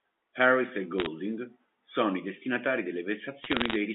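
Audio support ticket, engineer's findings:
Bit errors on a digital phone line, 0.98–1.06 s: short burst of sharp ticks and crackle over the speech. The digital trunk is the probable source. Flipped bits corrupt individual G.711 mu-law samples, and hits on the sign or high-order bits produce clicks.

Bit errors on a digital phone line, 3.43–3.76 s, right after "sono i destinatari": longer crackle run, same tick character. The density points to an error rate of around half a percent. Same line-side corruption of single samples. Band-limiting to about 200 Hz–3.4 kHz is consistent with the G.711 path.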